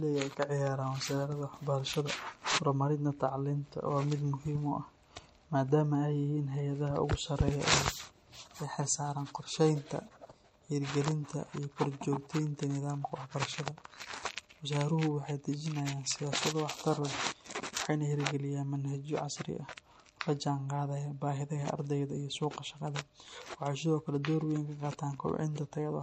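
Watery, swirling texture runs through the whole of this speech recording, with metallic chirping on s sounds, smeared onsets, and nothing above 16.7 kHz. These point to likely MP3 compression at a low bitrate, consistent with about 48 kbps, where weak frequency lines flicker between frames.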